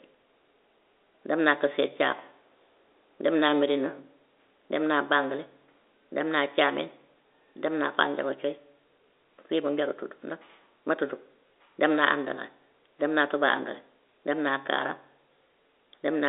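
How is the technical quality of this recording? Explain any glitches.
The recording has no glitches to explain, and its technical quality is that of ordinary telephone-band speech.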